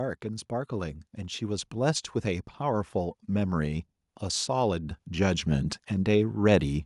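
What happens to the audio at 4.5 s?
At 4.5 s the automatic gain control is partway through a slow climb: sensing a quiet input, it keeps raising its gain from 0.21 s to 6.76 s, about 10 dB overall. The speech and the background noise swell upward together.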